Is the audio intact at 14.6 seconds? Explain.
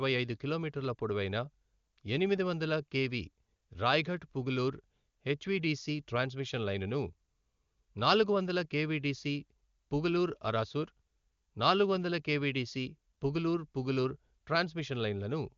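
Yes, the audio is intact at 14.6 seconds: the speech there carries no fault, only the usual AMR wideband (HD Voice) coding at 23.85 kbit/s, with nothing above about 7.1 kHz.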